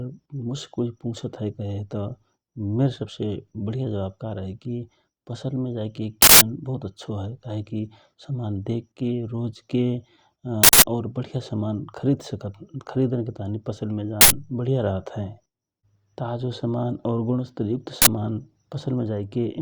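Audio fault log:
6.22–18.07 s, uninitialised buffer, four bursts: 6.22–6.41 s just after "पसल मे जाइके", 10.64–10.82 s, 14.21–14.30 s, and 18.02–18.07 s just after "समान और गुणस्तरयुक्त". Each burst is a loud blast of digital noise. Playback took a block before any audio was written to it. Stale memory was played as samples. The lengths shrink from 0.19 s to 0.09 s to 0.05 s. This fits blocks of 8192, 4096 and 2048 samples.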